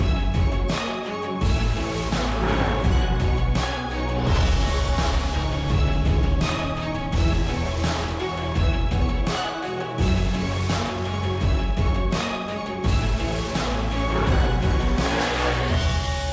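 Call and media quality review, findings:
Nothing here that needs a ticket; the audio holds together the whole way and there's no problem worth flagging.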